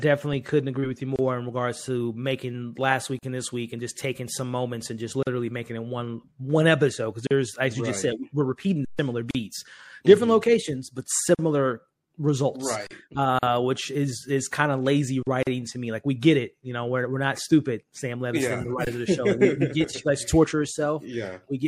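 Throughout, a watery, swirly treble with smeared attacks is likely MP3 compression at around 64 kbps, with lines dropping in and out between frames.

Gaps at a join of encoded pieces open every 2 s, at 1.16, 3.19, 5.23, 7.27, 9.31, 11.35, 13.39 and 15.43 s. The first lasts 28 ms and the rest 40 ms each. These are breaks left by encoder delay and padding, with edges smeared by the codec, and the sound resumes exactly where it stopped.

An underrun with held sample appears at 8.85 s (about 139 ms), 12.87 s, 15.23 s (40 ms each) and 18.85 s (about 21 ms). Here the waveform freezes flat at its last value, so the sound stops. Live audio was lost during each stall.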